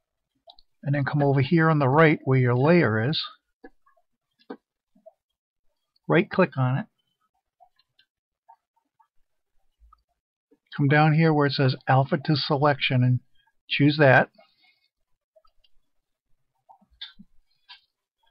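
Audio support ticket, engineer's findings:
Lost LE Audio frames, 17.83–17.85 s: brief 20 ms dropout where the sound turns into a short noisy smear instead of clean content. Likely component: Bluetooth LE Audio link into the LC3 decoder. Mechanism: decoder concealment repeats the last spectrum with randomised signs, so tonal detail blurs into noise. Duration fits two 10 ms LC3 frames; too short for the concealment fade-out to reach silence. Light lossy-codec coloration present across the clip.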